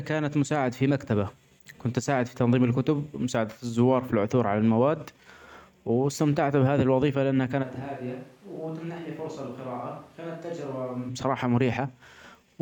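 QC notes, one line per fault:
7.64–11.08 s, switch to a distant microphone: the speech suddenly turns roomy and hollow, losing bass and dropping by around 10 dB, with background noise rising to roughly 25 dB below the speech. At 11.08 s it snaps back to the close, full sound. The likely cause is that the close microphone's signal dropped out and a more distant pickup filled in, capturing more room reflection and ambient noise and less direct sound.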